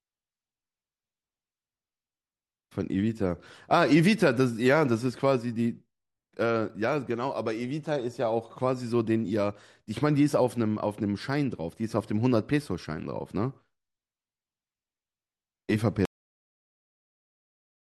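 A cut-off end arrives at 16.05 s, where the speech stops abruptly in the middle of a sound rather than finishing naturally. The final stretch of audio was never written out or played, so the signal falls straight to digital silence with no decay or room tail. That dead silence then runs for about 1.8 s to the end of the clip, leaving the last utterance visibly and audibly truncated.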